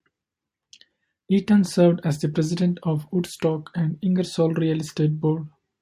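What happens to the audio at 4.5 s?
Nothing goes wrong at 4.5 s; the speech carries on intact through that moment, with no dropout, click or distortion to be heard.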